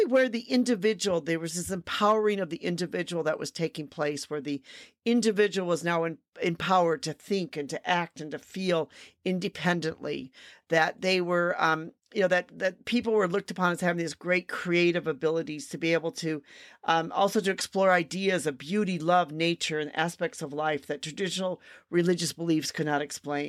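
The speech recording shows no technical faults anywhere in its signal path.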